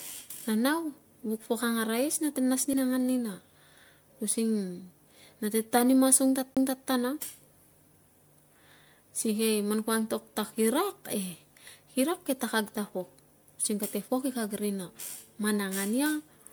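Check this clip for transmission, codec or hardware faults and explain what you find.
Two kinds of fault are present: generation loss across the whole speech clip, and two CD skips.

The generation loss runs throughout. The speech sounds swirly, hollow and smeared, with blurred consonant attacks, and nothing is present above 20.1 kHz. That points to repeated decoding and re-encoding, likely around seven MP3 passes at what fits 128 kbit/s, each quantising on a shifted frame grid. A single low-bitrate encode would sound duller but less swirly.

The CD skips come at 2.73 s and from 6.55 to 6.57 s. The laser jumped to another turn of the disc's spiral, so the player muted briefly, for a couple of milliseconds the first time and about 20 ms the second. Each is heard as a tick and an abrupt jump in the speech. A network dropout would leave a gap but not resume from a different place.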